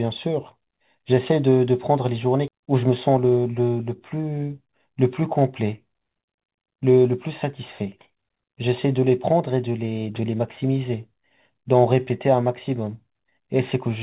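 At 2.48 s the speech does a skip ahead. Roughly a second of audio just isn't there, and the two sides are butted together with no gap and nothing patched in between. That's what happens when the receiver drops a chunk it was holding, or one that went missing on the way, because newer audio was already queued. It cuts the delay by about a second in one go, so you hear an abrupt jump rather than a pause.

Right after, from 2.58 s to 3.76 s, there's a jitter buffer speed-up. The speech runs at about 109% speed but keeps its pitch, so it comes across a touch rushed. The buffer was still holding more than it wanted, so it kept snipping out tiny slices a pitch period or so long, around a tenth of a second in total. All of it sits inside the narrow call-codec sound, with nothing above 4 kHz, which fits 64 kbps G.711 mu-law.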